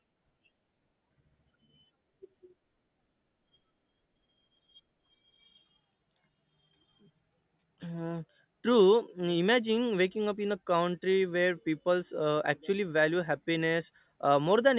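No technical faults are audible.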